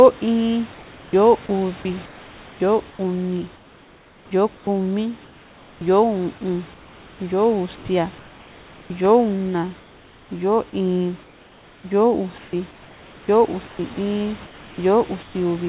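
From 0.74 to 5.81 s, the sender's voice detector likely switched repeatedly, chopping the sound: about 2.5 s of quiet edges became comfort noise. From 6.74 to 8.9 s, 9.8 to 10.31 s and 11.24 to 15.35 s, discontinuous transmission likely replaced the real background with comfort noise, heard as steady, featureless hiss. In the 9.8 s gap, with the background about 30 dB below the loud parts, that hiss sits about 2 dB quieter. Inside the last stretch, from 13.94 to 13.97 s, the voice detector likely dropped sound it mistook for background, leaving a 30 ms gap of steady noise. All of this rides on a G.711 call path with nothing above 4 kHz, over room noise about 25 dB below the speech.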